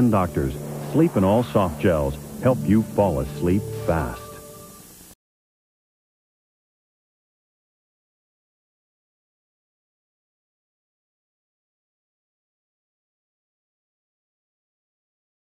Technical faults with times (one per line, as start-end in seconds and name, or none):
none